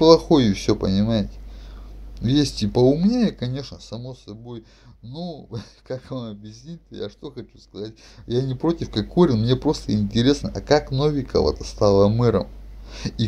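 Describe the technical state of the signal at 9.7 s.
At 9.7 s the signal is intact, with any level movement there being the ordinary smooth, fader-like kind rather than a fault.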